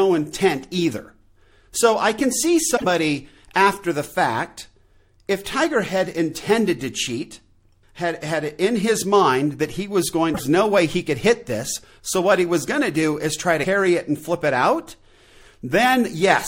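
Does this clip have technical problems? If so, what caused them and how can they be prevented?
Yes. Damaged data in a compressed stream: corrupted bytes made the decoder misread frames and lose sync while hunting for the next header. This causes brief disruptions at 2.73–2.85 s after "I can see", 10.31–10.40 s after "mind that he was", and 13.60–13.65 s after "to do is try". Checksummed transfers and verified copies prevent this.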